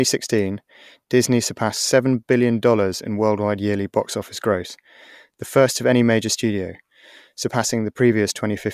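Nothing stood out on listening to the speech in this recording.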